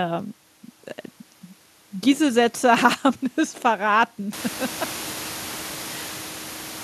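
No technical faults can be heard in this recording.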